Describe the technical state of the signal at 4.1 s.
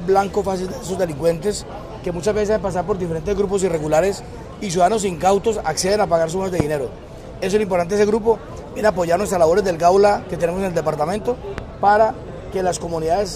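At 4.1 s the signal is intact, with no audible fault at that moment.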